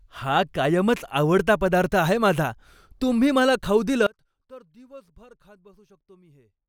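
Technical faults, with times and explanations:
4.07–6.69 s, one channel inverted: after "माझा तुम्ही मला खाऊ" the speech falls about 27 dB to a faint residue, likely from a polarity-reversed channel cancelling in mono, never the full silence of a dropout.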